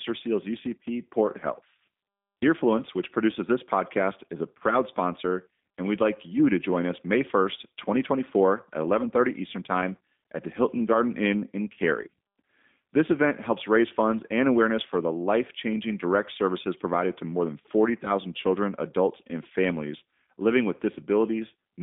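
From start to finish the speech carries the sound of the G.729 codec, which fits an 8 kbit/s VoIP link. The voice is rebuilt from a vocal tract model and a handful of pulses per frame, so it comes across plainly rough and faintly synthetic. The line passes roughly 200 Hz to 3.6 kHz. On a spectrogram, energy stops flat near 3.7 kHz, and the formants look smeared and blocky rather than finely striated.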